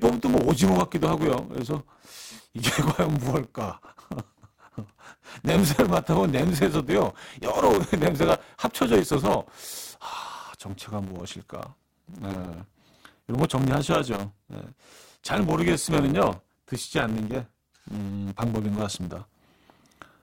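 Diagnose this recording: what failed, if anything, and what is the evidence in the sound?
A block size mismatch (truncated) runs through the whole speech recording, at the driver or buffer stage. A steady buzz at 100 Hz sits under everything, and the speech runs about 1.09 times faster than normal while keeping roughly its natural pitch. One stage is handing over longer blocks than the next one reads, so the tail of each block is discarded. Each cut produces a small discontinuity, one hundred times a second, and the lost samples shorten the timeline.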